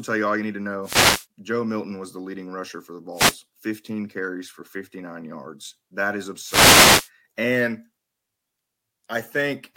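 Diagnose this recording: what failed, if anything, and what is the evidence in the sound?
Wireless microphone noise hits on the analogue radio link: static bursts at 0.83–1.26, 3.13–3.39 and 6.42–7.10 s, where the FM signal fades and receiver noise swells up.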